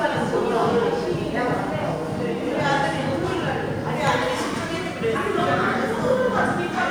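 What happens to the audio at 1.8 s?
Nothing goes wrong at 1.8 s; the audio is intact at that moment.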